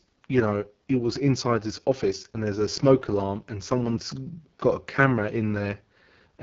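From start to finish the speech sounds rough and raspy, with nothing above 7 kHz. This is AMR wideband (HD Voice) codec damage, heavy enough to suggest its lowest rate, near 6.6 kbit/s, where the pulse-driven vocal tract model breaks down.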